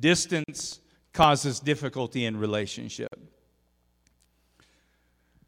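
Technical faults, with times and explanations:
0.44–0.48 s and 3.07–3.12 s, gap at a join of encoded pieces: silences of about 45 ms and 48 ms break the speech where separately encoded segments meet, untrimmed encoder delay and padding leaving a blank vertical stripe on the spectrogram.
0.60–1.36 s, CD scratch ticks: seven short clicks, the longest about 2 ms, repeat regularly until "difficulty in", from unrecoverable disc errors each revolution, appearing as brief notches in the waveform.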